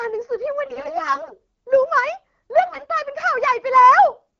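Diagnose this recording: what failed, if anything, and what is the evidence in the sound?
The failure is at the network stage, in the radio link feeding the AMR-WB decoder: AMR bit errors. From 0.65 to 1.35 s and again from 2.66 to 2.87 s the speech keeps its pitch and loudness but turns hoarse, scratchy and gargly. That pattern points to corrupted frames whose core bits passed the checksum while the less protected bits were flipped, at roughly one bit in ten, worse in the second burst. The decoder then places excitation pulses wrongly and misreads fine pitch, gain and spectral values. The codec itself, running at a clear 12.65 kbit/s, does not account for the roughness.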